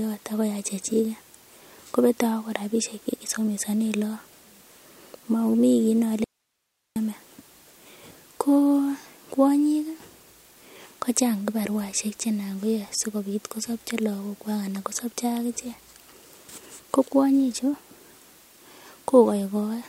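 At 6.24 s the speech cuts out abruptly and stays gone until 6.96 s, about 0.72 s, before returning mid-flow: an audio dropout to a faint residue. The gap is not silent but holds only hiss, roughly 55 dB below the speech, so the path after the break stayed live while the signal feeding it was likely interrupted. The hard edges on both sides, with no decay or ramp, separate it from a natural pause or a fade.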